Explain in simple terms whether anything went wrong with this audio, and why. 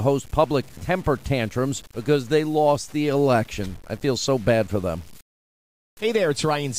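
Something did go wrong: the audio was likely stored with too few steps of loudness, a fault called low bit depth without dither, and the grain it leaves fits about 7 bits, cut off by simple truncation. Because the rounding error follows the voice instead of being smoothed away, quiet stretches of this speech sound gritty and crackly, and the softest moments break up or sputter. It lasts from start to finish.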